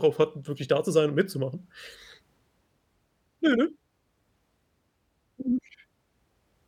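No technical faults can be heard anywhere in the speech, and the signal holds steady throughout with nothing breaking its continuity.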